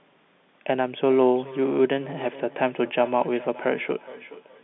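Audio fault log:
0.83–4.64 s: feedback echo between two devices. The speech comes back at roughly 0.4 s intervals, thin and ringing, peaking about 19 dB below the direct signal. A second device in the room plays the call aloud, and the first device's microphone picks that sound up again, which its echo canceller does not remove because it only cancels what its own device plays.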